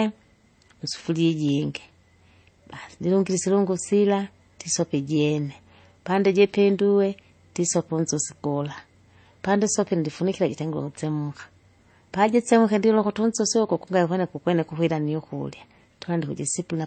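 Throughout the speech nothing rises above 8.3 kHz, and two coding textures overlap: gritty smearing beneath a swirly, synthetic top. That layering, rather than one codec's single artefact, marks transcoding between lossy codecs, likely a low-rate MP3 re-encoded as HE-AAC.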